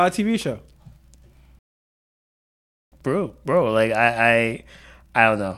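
At 1.59 s the speech cuts out and stays silent until 2.92 s, about 1.33 s, a playback stall, likely the player running dry or getting blocked.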